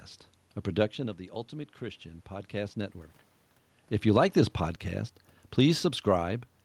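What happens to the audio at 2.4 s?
At 2.4 s the automatic gain control is rising. From 1.5 s to 3.04 s it slowly raises its gain by about 3 dB after the input level has fallen by about 12 dB, so the sound swells gradually over roughly a second and a half. What sets this apart from a talker simply moving closer is that the room noise swells along with the voice, because the whole signal is amplified, not just the source.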